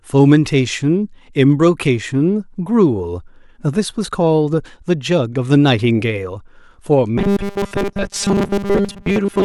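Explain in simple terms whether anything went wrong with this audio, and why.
From 7.18 s to 9.45 s, audio likely arrived too seldom, so tiny chunks repeated. This caused robotic sound from repeated short buffers, a rigid 200 Hz buzz.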